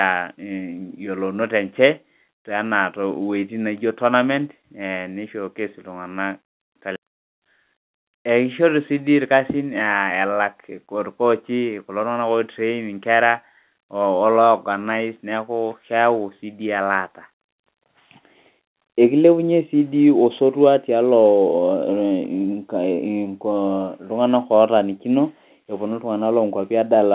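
No technical faults occur anywhere in this speech clip, which carries the expected narrow, telephone-band sound of mu-law G.711 coding.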